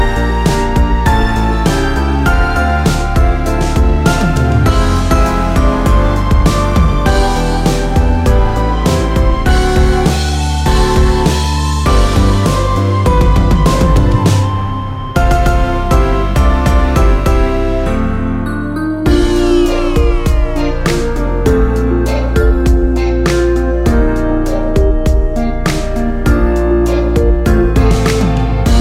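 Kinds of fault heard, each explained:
Crude rate conversion: from 22.63 to 25.68 s, samples were linearly interpolated without a filter, which fits a 44.1 kHz to 48 kHz change. The error, roughly 45 dB below the sound, adds a faint, gritty, inharmonic fizz that tracks loud and bright passages.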